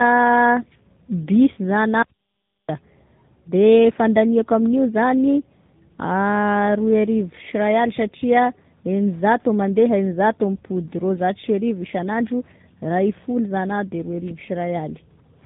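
Throughout the clip the speech carries tandem speech coding damage. The call seems to have crossed two low-rate speech codecs in a row, consistent with a GSM full-rate leg and then AMR-NB at about 10.2 kbit/s. Each coder had to re-encode the errors of the one before, so the artefacts stack. The result is rough, muffled and warbly, with nothing above 3.8 kHz.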